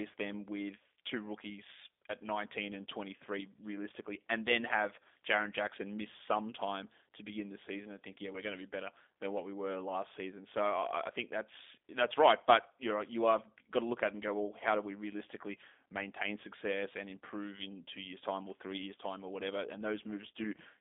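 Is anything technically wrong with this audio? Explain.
Yes. Throughout the clip the speech carries G.729 codec damage. The codec rebuilds each 10 ms frame from a vocal tract filter, a pitch predictor and a few excitation pulses, which fits an 8 kbit/s G.729A stream. Nothing above 3.8 kHz remains, and the line band runs from 250 Hz to 3.6 kHz. A plain telephone band-limit would only sound narrow. Here the speech is also rough, buzzy and slightly synthetic, and that is plainly audible.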